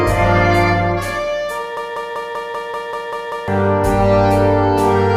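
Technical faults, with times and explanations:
1.77–3.48 s, broken-record loop: playback stops moving forward and replays one short fragment of about 194 ms, nine times back to back, for roughly 1.7 seconds. Likely cause is a player, encoder or stream that stalled and kept pushing out the last piece it had buffered. Each repeat is identical, so the sound stutters mechanically at about five cycles per second. Whatever should have played in that span never arrives, and the audio resumes further on with that portion missing.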